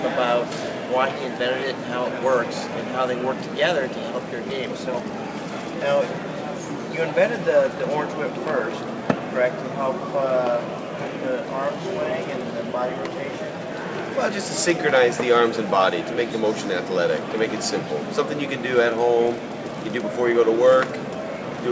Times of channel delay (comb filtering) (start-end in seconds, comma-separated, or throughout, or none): none